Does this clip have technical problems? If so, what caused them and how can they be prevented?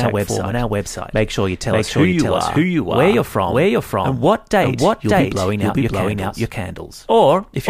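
Yes: a doubled audio track runs throughout, an equally loud copy about half a second behind, likely from two capture paths. Unlike echo, it has no decay or room colour. Monitor a single capture path and remove duplicate routing.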